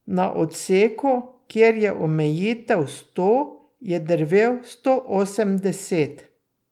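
No technical faults can be heard anywhere in the speech, so there is nothing to describe in time order.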